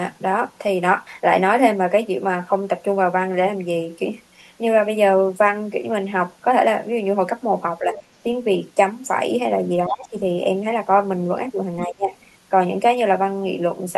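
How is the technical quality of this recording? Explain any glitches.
The speech has three kinds of glitch: a steady series of faint clicks throughout, short dips in the talker's level in three places, and a brief scrap of a second voice.

Clock slip clicks: From 1.13 s to 13.61 s, a faint tick recurs about every 1.5 s, roughly ten in all, most noticeable on louder, sustained speech and absent in pauses. The likely cause is two devices each running on its own clock with a mismatch of around 15 ppm. Each time that drift adds up to a whole sample, a single sample is dropped or repeated, leaving a tiny discontinuity at a regular interval.

Speech suppressed in double talk: The talker's voice sinks at 7.80–7.97 s by about 5 dB, then much harder at 9.87–10.14 s (about 20 dB) and 11.87–12.13 s (about 25 dB). These dips likely come from an echo canceller meeting both parties talking at once. Unable to tell the near talker from the loudspeaker echo, it turned the whole microphone signal down.

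Other side's voice leaking through: At 7.93–8.01 s, overlapping the first dip, a fragment of another voice appears, about 20 dB below the main speech. It is likely residual echo. The far party's voice played from the loudspeaker reached the microphone, and the echo canceller failed to remove it completely during that moment of double talk, so a brief, quiet scrap slips into the recording.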